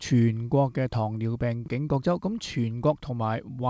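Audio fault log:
No faults are present in this audio. It came through a WebRTC call path using the G.722 codec at 64 kbps, so nothing is heard above 8 kHz.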